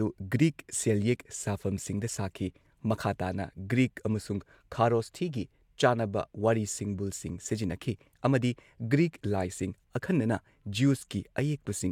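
No technical faults can be heard anywhere in this speech recording. Nothing in it calls for a note on timing or cause.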